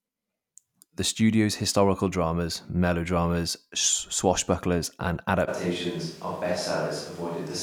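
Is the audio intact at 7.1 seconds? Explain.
No. From 5.50 s, after "dramas melodramas swashbucklers and", to the end, speech turns roomy, thin and quieter. This is likely a switch to a distant microphone.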